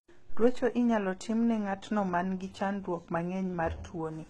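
Throughout the speech, the treble sounds synthetic: s sounds come out gritty and lispy, and nothing reaches above about 11.8 kHz. The likely cause is heavy HE-AAC compression, at a rate the damage suggests is near 16 kbps, where the upper band is rebuilt from copied lower bands rather than coded. A plain low-pass filter would simply dull the top, and ordinary MP3 damage swirls instead. Here the treble is present but metallic and misaligned.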